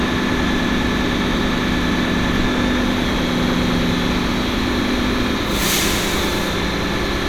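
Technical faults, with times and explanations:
Nothing stood out on listening to this recording of sounds.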